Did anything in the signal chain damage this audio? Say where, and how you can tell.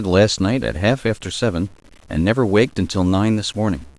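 Yes. Throughout the speech, a grainy grit rides along with the sound, roughly 35 dB down. The likely cause is low bit depth without dither at a sample-format conversion, which fits 8-bit rounding, so the error follows the signal.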